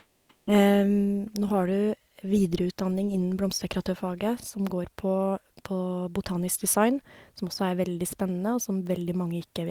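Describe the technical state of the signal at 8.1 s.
At 8.1 s the speech comes through intact, with no dropout, click, distortion or other audible fault.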